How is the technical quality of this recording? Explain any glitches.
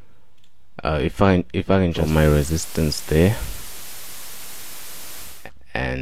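The recording has one clear fault. From 1.90 to 5.50 s there is digital radio blending to analogue. The receiver lost its digital stream and cross-faded over 0.28 s to the station's FM broadcast, then back. Hiss rises to roughly 20 dB below the signal. The level shifts by about 4 dB.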